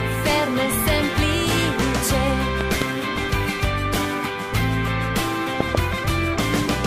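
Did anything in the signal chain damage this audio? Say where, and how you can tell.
Yes. There's a loud pop twice, from 2.61 to 2.84 s and again from 5.60 to 5.77 s, and each one is really a pair of pops in quick succession, jumping to roughly 15 dB above the sound while it carries on underneath. That points to the analogue side: likely a voltage step from a plug, switch or static discharge getting added to the signal, with the downstream circuitry shaping it into a sharp double thump.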